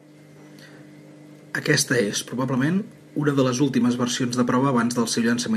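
Nothing stood out as a technical problem on listening to the speech here.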